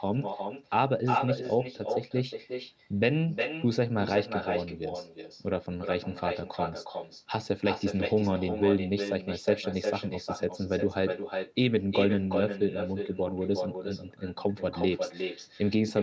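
From start to finish, every phrase is trailed by a quieter, thinner copy arriving roughly 0.4 s later: an echo with no canceller. The far end's loudspeaker feeds back into its microphone, and nothing subtracts that returning signal, so the speech comes back about 6 dB down after the network round trip. On the waveform each syllable burst has a smaller ghost behind it. The spectrogram, empty above 8 kHz from the call microphone processing, shows each harmonic pattern repeated, fainter, shifted right.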